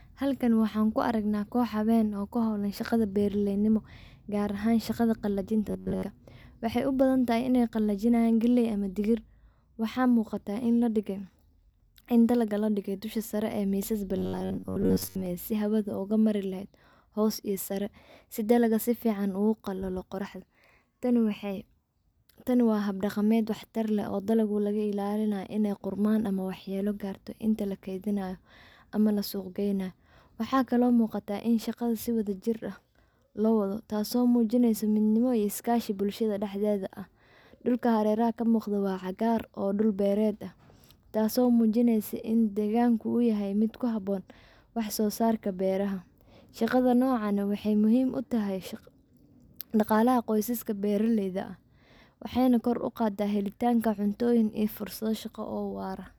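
Speech in which two passages turn into robotic sound from repeated short buffers: 5.69 to 6.05 s, after "gaar ahan shaqada qalajinta", and 14.18 to 15.26 s, after "sare ee misas". Both have a rigid 93.8 Hz metallic buzz, most likely from a roughly 10.7 ms buffer being replayed over most of the audio. The spectrogram shows evenly spaced harmonic lines, and the waveform shows identical repeating cycles.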